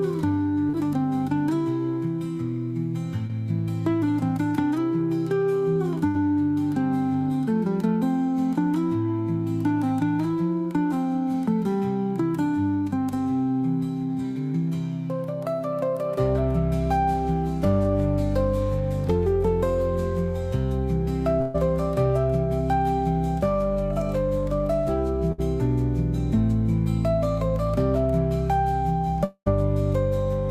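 At 0.69 to 0.75 s and again at 3.27 to 3.31 s there is short concealed packet loss: about 40 ms and 20 ms of audio failed to arrive, and the decoder extended the preceding sound to cover each hole, leaving a brief smear before the real signal resumes.

Bursts of packet loss follow at 6.07 to 6.17 s, 21.41 to 21.56 s and 25.32 to 25.40 s, removing about 80, 140 and 60 ms respectively. In each, the last sound is held and faded, then playback jumps ahead with that span gone.

From 29.24 to 29.48 s about 220 ms is missing. The concealment stretches the previous sound and decays it, and the final 60 ms is silent before audio returns further on. The likely cause is a long network dropout.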